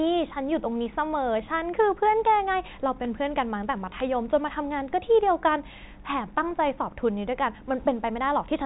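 Nothing goes wrong anywhere in this speech, which simply carries the usual narrow telephone sound of G.711 coding, with nothing above about 3.8 kHz and only the faint, level-following grain that format leaves behind.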